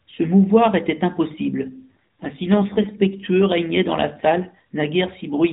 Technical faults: AMR rate drop

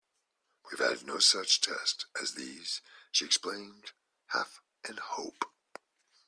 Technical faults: none

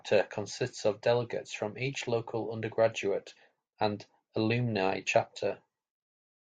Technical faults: none

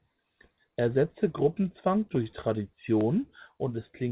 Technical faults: repeated stalls (stutter)

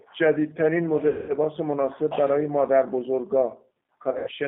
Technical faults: G.729 codec; VoIP packet loss concealed by the speech codec

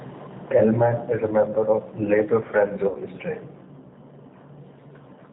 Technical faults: G.729 codec; VoIP packet loss concealed by the speech codec

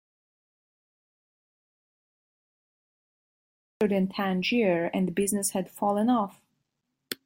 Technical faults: audio dropout to silence

